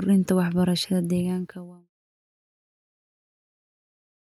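No technical faults are audible in this speech recording.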